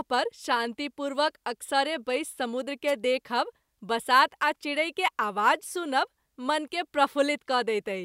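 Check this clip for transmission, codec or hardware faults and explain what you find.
There's one fault here, a wireless microphone noise hit, from about 2.87 to 2.92 s. The analogue FM link briefly faded as reflected radio paths cancelled, letting receiver noise surge up over the speech. You hear it as a quick swish of static, roughly 45 ms long.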